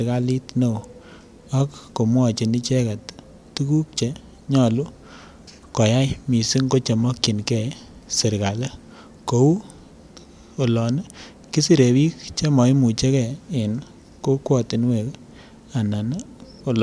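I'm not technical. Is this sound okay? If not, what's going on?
Yes, this sound is okay, and nothing is going on with it that needs fixing.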